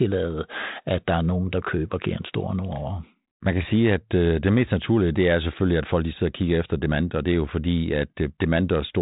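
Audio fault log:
No faults logged; the speech carries light, level-following hiss and no content above about 3.8 kHz, as expected of G.726 ADPCM at what sounds like its 32 kbit/s setting.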